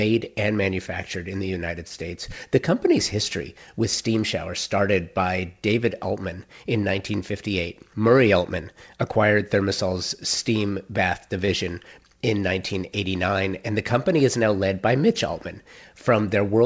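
Speech over a call path that leaves nothing above 8 kHz has short concealed packet loss at 1.88–1.92 s and 11.46–11.49 s. Each time, about 20 ms failed to arrive and was patched by extending the preceding sound, heard as a brief smear. A spectrogram shows smoothed, repeated-looking frames there.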